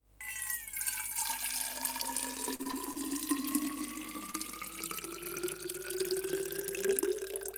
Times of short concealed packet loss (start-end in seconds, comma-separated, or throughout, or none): 4.31-4.35